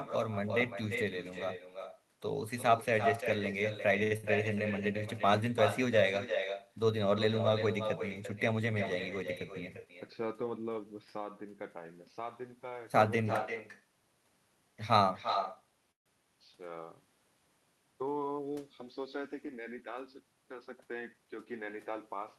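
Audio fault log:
throughout: echo with no canceller, the far end's loudspeaker feeds its microphone, returning the speech about 7 dB quieter, roughly 0.3 s late, as a thin shadow.
4.03–4.14 s: short stall from a late packet, a sound held 74 ms while the buffer waited; nothing lost, unlike the loss burst that follows.
4.17–4.26 s: burst of packet loss, 63 ms of fading held sound, then resumption skipping about 60 ms of audio, unlike a stall.
9.85–10.78 s and 20.94–21.91 s: jitter buffer speed-up, pitch periods trimmed, roughly 0.1 s each time, so speech runs 108–109% fast and hurried at unchanged pitch.
15.92–16.09 s: call audio freeze, a brief fading fill, then about 130 ms of silence before continuing from the same point, likely held-up packets; 141 ms inserted, nothing lost.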